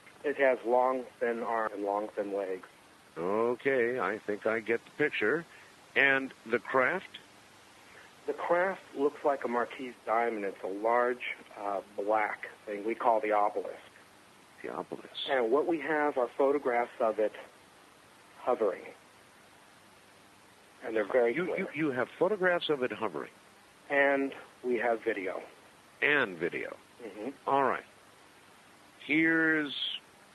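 At 1.67 to 1.69 s there is a skip ahead: about 0.4 s of audio is simply gone, and the material on either side is butted together with no silence or filler in the gap. That seamless forward jump sets it apart from a dropout, which would leave an audible hole.

From 1.77 to 3.11 s a jitter buffer speed-up follows. The receiver trimmed short pitch-period-sized pieces repeatedly, roughly 150 ms in total, so playback runs at 112% with the pitch unchanged. Resampling would shift the pitch along with the speed. The Opus call path limits the bandwidth to 12 kHz throughout.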